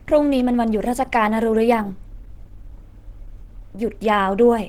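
Throughout, the speech sounds hoarse and grainy rather than MP3-like swirling, pointing to Opus compression, likely in hybrid speech mode, which fits about 16 kbps.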